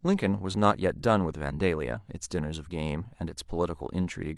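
At 1.91 s, the speech breaks into a brief glitch lasting about 60 ms, ending at 1.97 s. This is damaged data in a compressed stream. Some frames arrived corrupted. The decoder misread them and lost sync. It then hunted for the next valid frame header.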